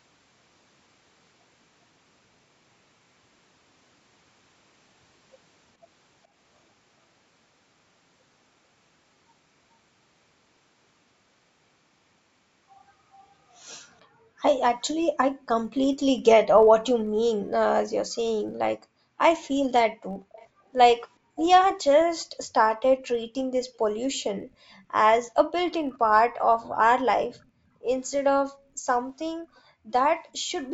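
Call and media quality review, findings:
Filter restarted on every block, whole clip: steady buzz around 43.1 Hz riding the speech, louder on loud passages, quieter in pauses. Fits a 1024-sample block. The filter's state gets zeroed each block, so every block opens with a tiny transient.

Background gated by the echo canceller, 15.31–15.48 s and 16.56–17.15 s: room tone ducks about 40 dB, roughly 150 ms and 300 ms of it, then comes back. Canceller clamping the mic while the far end plays.

Same gating at 26.64–28.86 s, shallower at about 31 dB, around a second affected in total. Background sags, then recovers once the canceller lets go.

Echo leak, 20.32–22.25 s: faint delayed copy of the speech, 431 ms late and about 20 dB under the direct signal. Likely a far-end loudspeaker the canceller didn't fully subtract, so the residue gets sent back.

Second leak at 29.56–29.6 s: a brief scrap, 438 ms behind and about 40 dB down. 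Likely the same path, same delay, just less getting through. The low-bass roll-off on the call mic chain is expected.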